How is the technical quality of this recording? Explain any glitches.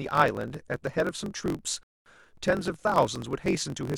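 The recording has two glitches: a steady buzz with slightly hurried speech throughout, and one brief dropout near the middle.

Throughout, a low buzz at about 45.9 Hz sits under the speech, which runs about 1.07 times fast with its timbre intact. This is a block size mismatch (truncated): one stage writes longer blocks than the next reads, fitting 1024-sample blocks, and each block's tail is discarded, shortening the audio and buzzing at the block rate.

From 1.83 s to 2.06 s the sound drops to silence, then picks up exactly where it left off, adding about 0.24 s. This is a rebuffering stall: playback ran out of downloaded audio and paused until more arrived, so nothing is lost, only delayed.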